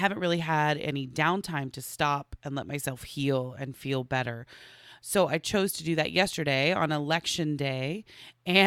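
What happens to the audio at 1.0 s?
Nothing goes wrong at 1.0 s; the audio plays through that moment intact, with no dropout, click or distortion.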